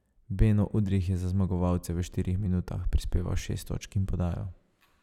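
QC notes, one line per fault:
Nothing to flag here, this one sounds fine to my ears.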